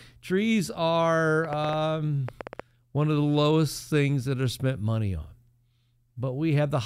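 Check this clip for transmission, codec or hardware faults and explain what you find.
A train of clicks runs from 1.45 to 2.6 s, likely from interference from nearby equipment or a faulty connection or power supply injecting repeated pulses. Around ten similar clicks arrive unevenly, about 7.8 per second, popping out roughly 10 dB above the speech, pauses included.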